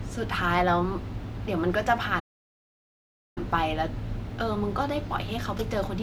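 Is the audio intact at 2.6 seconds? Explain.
No. At 2.6 seconds the clip is inside a playback stall that runs from 2.19 to 3.38 s, about 1.17 s in all. The player most likely ran short of buffered data, or its audio thread was held up, so nothing reached the output until it caught up. The speech cuts off abruptly mid-flow, leaves more than a second of dead silence, and then resumes.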